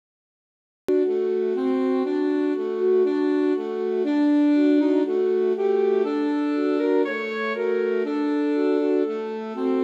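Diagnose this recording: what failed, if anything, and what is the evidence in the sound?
Cut-off start at 0.89 s: after digital silence from 0.0 s, the sound begins mid-event with no attack, because capture or streaming started late.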